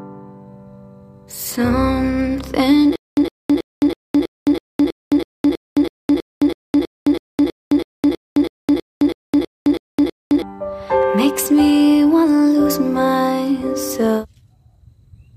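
From 2.96 s to 10.42 s the audio sticks: the same 110 ms burst of sound repeats 23 times, each followed by about 215 ms of dead digital silence, so it returns at an even pace of one every 325 ms. This stutter with silent gaps is likely a player or stream stall: on each retry it replayed the last buffered fragment and then ran dry, and the sound that belonged in those 7.5 s is missing.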